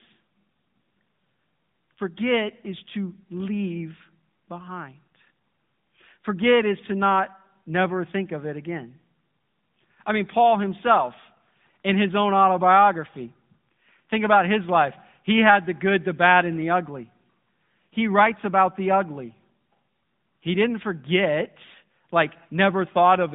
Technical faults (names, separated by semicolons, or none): AMR narrowband mobile codec